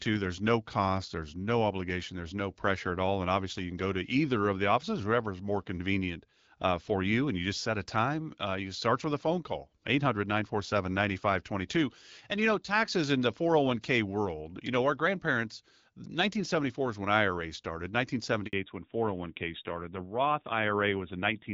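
A speech recording with two network faults near its end. At 18.47 s a handover gap cuts the audio for about 60 ms, up to 18.53 s: the waveform collapses to a flat line, and the spectrogram shows a narrow blank column where no frames arrived while the call moved between networks. From 18.53 s to the end, a fallback to narrowband removes everything above 4 kHz. The spectrogram's upper band, previously filled to about 7 kHz by the HD Voice codec, abruptly goes empty, and the voice turns duller and rougher, which fits a low-rate narrowband codec around 7.4 kbit/s.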